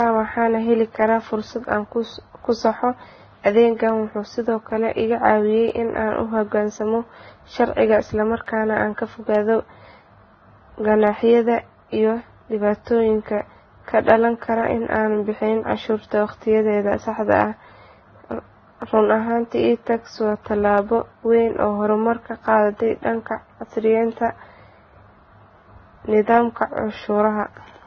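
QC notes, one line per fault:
Throughout: transcoding between lossy codecs. Nothing is heard above 6.8 kHz, and smeared, watery detail sits under a second layer of coding noise. The cause is likely a low-rate Vorbis encode re-encoded to AAC-LC, the second codec wasting bits on the first one's artefacts.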